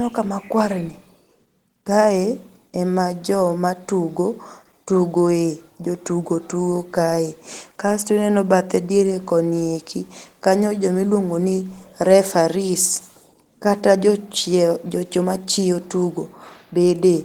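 Opus voice compression is plainly audible throughout: coarsely coded excitation leaves the speech hoarse and slightly robotic, which fits hybrid coding at about 16 kbps.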